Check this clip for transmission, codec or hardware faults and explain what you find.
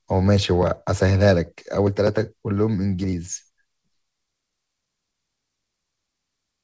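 No transmission, codec or hardware faults are audible in the speech, which has come through a wideband call path with nothing above 8 kHz, consistent with a G.722-type codec.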